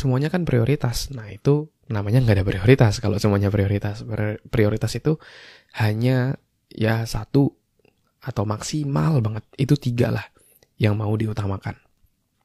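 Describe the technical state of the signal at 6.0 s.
At 6.0 s the speech signal is intact, with no audible fault at that moment.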